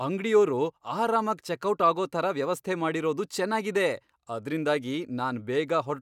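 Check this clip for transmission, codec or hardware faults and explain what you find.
Nothing stood out on listening to this speech recording that would point to a problem in transmission, encoding or the recording hardware.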